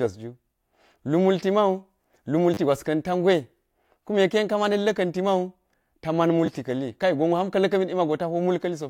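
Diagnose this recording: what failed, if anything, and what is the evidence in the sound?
The fault sits at the driver or buffer stage: a repeated buffer, twice in this speech. At 2.54 to 2.57 s a 10 ms slice plays three extra times, and at 6.46 to 6.48 s, just after "ta man", one plays twice more, heard as a brief buzzy stutter. When fresh audio missed its deadline, the device replayed its last block, and a few tens of milliseconds were skipped. The waveform shows identical 10 ms segments with hard joins; the spectrogram shows thin vertical lines at each join and a comb-like stripe at 100 Hz spacing.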